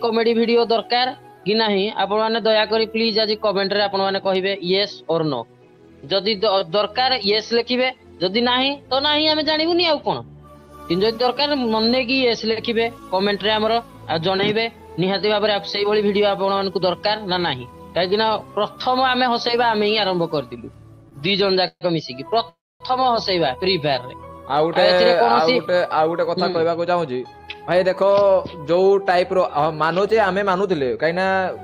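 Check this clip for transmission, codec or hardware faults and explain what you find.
Network delay shows up as one brief stall, two longer freezes and two stretches of speed-up, all in the second half of the clip.

Short stall from a late packet, 21.09 to 21.13 s: the jitter buffer ran dry, so the last sound was held about 21 ms until the packet came. Nothing is lost, only a slight smear. Unlike a freeze, there is no fade or silence.

Call audio freeze, 21.67 to 21.83 s and 22.49 to 22.82 s: the sound stretches into a decaying buzz, then drops to silence for about 70 ms and about 250 ms, before resuming where it stopped. Packets held up in transit likely emptied the buffer. Unlike the short stall, these last 135 and 314 ms and reach silence.

Jitter buffer speed-up, 24.56 to 28.02 s and 29.59 to 30.91 s: after the freezes, the surplus buffered audio was trimmed by dropping short pitch-period slices. 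Playback runs about 8% fast at unchanged pitch, shedding about a third and a tenth of a second. This differs from a pitch shift: it sounds hurried, not higher.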